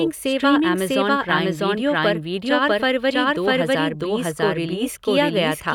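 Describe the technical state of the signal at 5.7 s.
At 5.7 s the speech is carrying a doubled audio track, present for the whole clip: a second full-band copy trails the original by roughly 0.7 s at about equal level, dry and uncoloured, most likely from a slower second capture path or misaligned edit.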